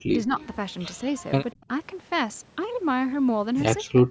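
Right at the start, from 0.06 to 0.36 s, the talker's level collapses in pieces, dipping by something like 35 dB at worst. That's speech suppressed in double talk, likely the echo canceller hearing both ends at once, failing to separate the near talker from the far-end echo, and ducking everything. It comes back three more times: a mild dip of around 5 dB at 1.03 to 1.09 s, a deep cut of about 30 dB from 1.53 to 1.70 s, and roughly 25 dB of chopping from 3.82 to 4.08 s.

Tucked in just after the first dip, at 0.39 to 0.46 s, there's a faint repeat of the talker arriving about 191 ms late, sitting around 25 dB under the main voice. That's an echo leak, likely a loudspeaker at one end whose canceller let a scrap of the microphone pickup slip through and get sent back. The whole thing is band-limited with nothing above 8 kHz, as you'd expect from call microphone processing.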